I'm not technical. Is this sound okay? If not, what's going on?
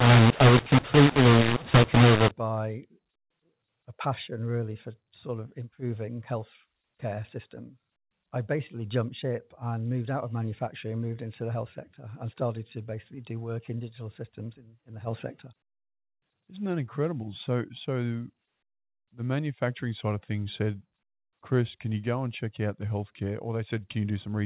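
No, the first couple of seconds are off. From the start to about 2.31 s there's a mu-law and A-law mix-up: the telephone audio was packed using A-law but unpacked as if it were mu-law. Those two methods store loudness differently, so levels get scrambled, some parts too loud and others too quiet. The speech sounds harsh and gritty, and the gaps between sounds fill with hiss instead of silence. After that the phone-line sound, limited to the usual narrow telephone range, carries on as intended.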